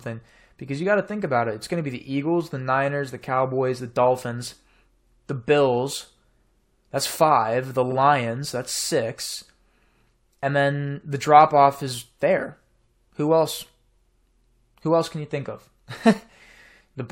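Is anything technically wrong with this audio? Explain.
Yes. There is one fault: repeated frames at 7.91 to 7.95 s. A 46.4 ms block of the compressed stream was delivered twice, so the decoder plays that short stretch of speech once more before continuing. The length fits two consecutive codec frames being duplicated. The result is a brief stutter, a quick doubling of the same sound, and everything after it is delayed by 46.4 ms.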